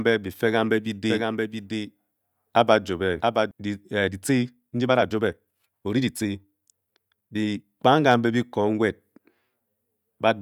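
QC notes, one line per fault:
1.09–3.51 s, doubled audio track: a second full-band copy of the speech trails the original by roughly 0.7 s at about 5 dB quieter. It is dry, with no decay or room colour, and starts and stops abruptly. This likely comes from a slower capture path or an edit holding two out-of-step copies.
3.92–7.64 s, time-stretched section: the pace jumps abruptly to 1.4 times normal speed while the pitch stays unchanged, so the speech sounds rushed. This is likely software squeezing the passage to fit a length, dropping short pieces to preserve pitch.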